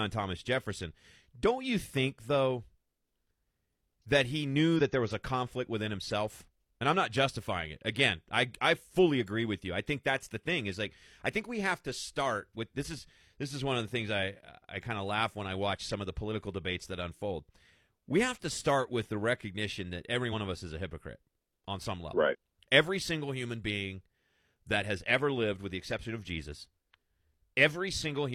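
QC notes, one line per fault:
4.76–4.81 s, 20.29–20.33 s and 22.29–22.35 s: compressed frames skipped. Speech jumps ahead by about 40 ms at the first two and roughly 100 ms at the third, fitting one or two lost 42.7 ms frames. Each join is a jump ahead in the audio, unlike a dropout's silent gap.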